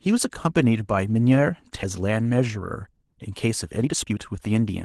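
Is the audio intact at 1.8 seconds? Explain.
No. A skip ahead occurs at 1.83 to 1.85 s. Roughly a second of audio was thrown away, most likely by the jitter buffer as it overflowed and discarded a backlog while later audio was already waiting. Playback lurches forward with no filled gap, so the sound on either side of the jump is butted almost directly together, cutting abruptly from one point in the speech to a moment about a second further on.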